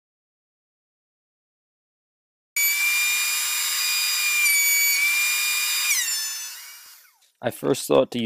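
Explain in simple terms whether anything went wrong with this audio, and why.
The clip opens in total silence until 2.56 s, an audio dropout to silence, likely from the input being disconnected or muted while recording continued.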